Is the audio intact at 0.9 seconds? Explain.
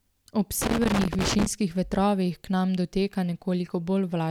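No. At 0.9 seconds the speech is broken up by an irregular burst of crackle and scratching, which runs from about 0.62 to 1.46 s and clears just before "vetrovih k nam doteka". This is loose connector crackle: a worn or dirty contact in the signal path is making and breaking rapidly as it shifts, chopping the signal into fragments, while any DC present on the line turns each reconnection into a pop.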